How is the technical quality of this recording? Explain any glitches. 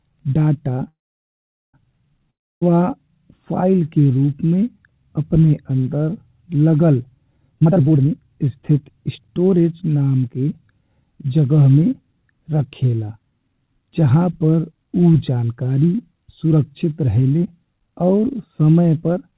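The recording has one clear glitch, a long network dropout from 2.30 to 2.71 s. The likely cause is a break in packet delivery: about 0.32 s of audio never arrived, and the receiver filled the gap by extending the last sound for around 0.31 s. That fill is heard as a buzzy tail that fades into roughly 0.3 s of silence before the speech resumes, with 18 ms of extra time added and the lost portion simply gone. The audio carries the narrow band of a G.711 mu-law call path, with nothing above 4 kHz.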